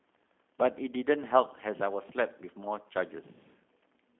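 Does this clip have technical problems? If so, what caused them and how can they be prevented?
Yes. Throughout the speech the sound is thin, boxed-in and plainly rough and synthetic, with nothing above 3.4 kHz and little below 200 Hz. This is G.729 codec damage, and the rate of detail loss points to an 8 kbit/s coding. Rather than storing the waveform, the codec rebuilds each short frame from a vocal tract filter, a pitch predictor and a few pulses, which produces the buzzy, smoothed texture. Recording or transferring over a wideband path, or a higher-rate codec such as Opus, would prevent it.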